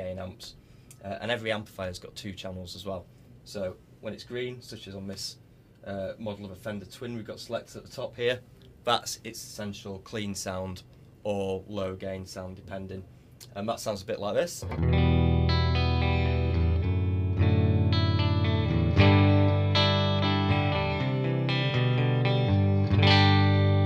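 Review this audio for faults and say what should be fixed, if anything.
No faults are audible here; nothing needs fixing.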